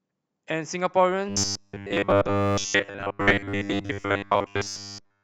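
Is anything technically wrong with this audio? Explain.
Yes. From 1.29 s to the end at 5.23 s, the speech takes on a robotic sound from repeated short buffers. The likely cause is audio arriving too seldom, so playback keeps looping the most recent 10 ms chunk for most of that stretch while fresh audio is skipped. That loop imposes a fixed 100 Hz metallic buzz that only loosely tracks the words. A spectrogram shows rigid horizontal harmonic lines at multiples of 100 Hz, and the waveform shows identical 10 ms segments repeating.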